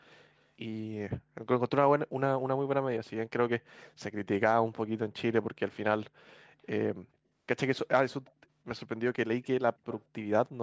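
Faint, brief scraps of delayed sound appear at 0.38–0.45 s, 8.26–8.32 s, 9.42–9.46 s and 9.9–10.01 s, each trailing the speech by about 200 ms. This echo leak likely comes from a far-end loudspeaker whose echo canceller let residue through. The first three are very quiet, roughly 35 to 40 dB down, and show as barely visible smears on a spectrogram. The last is far stronger, around 20 dB below the speech, and stands out more than the others.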